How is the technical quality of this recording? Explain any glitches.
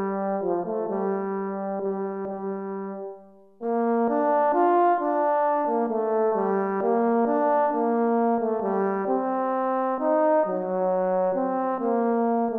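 No glitches or technical faults can be heard here.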